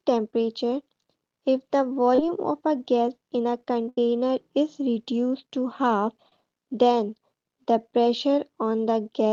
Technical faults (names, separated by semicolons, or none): short concealed packet loss; burst of packet loss